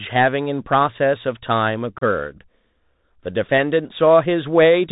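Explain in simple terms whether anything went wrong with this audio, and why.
Yes, two things went wrong. Throughout, the speech sounds narrow and boxy, with scratchy s sounds and a grainy hiss underneath. That comes from the Bluetooth CVSD headset codec, a low-quality headset link that passes nothing above 4 kHz and distorts loud, bright sounds.

Between 1.96 and 2.02 s, the speech briefly breaks up into tiny holes with hard edges, then returns quieter for a moment. This is unconcealed Bluetooth headset packet loss: about ten small chunks of audio never arrived, leaving roughly 38 ms missing, the longest gap being 30 ms, and nothing filled them in.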